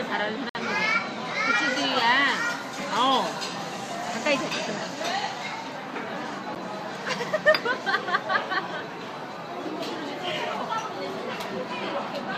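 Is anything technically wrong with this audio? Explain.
Yes, there are two gaps between stream segments. The timestamps of consecutive 6-second segments don't quite meet, so the player inserts silence to fill the space. A hard-edged hole of about 56 ms cuts the sound from 0.49 to 0.55 s, and a briefer 9 ms one occurs at 6.55 s, roughly one segment later. No audio is lost.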